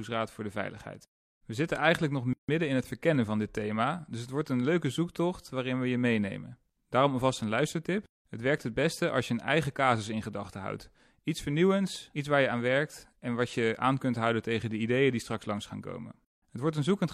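At 2.33 s, right after "zitten eigenlijk nog", the speech drops into a 154 ms silence before resuming with "in het verkennen van". This gap at a join of encoded pieces comes from separately encoded segments spliced without trimming encoder delay and final-frame padding. A waveform shows a flat break with smeared edges; a spectrogram shows a vertical blank band with blurred edges.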